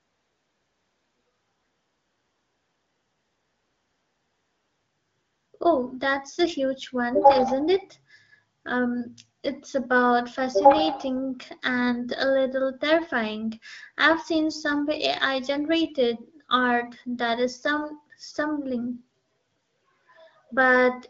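No technical faults can be heard in this speech.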